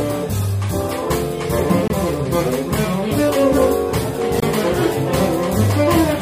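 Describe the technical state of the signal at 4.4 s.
A gap between chunks runs from 4.40 to 4.42 s: about 23 ms of hard-edged silence at a 2.5 s chunk join, showing as a flat waveform and a blank vertical stripe.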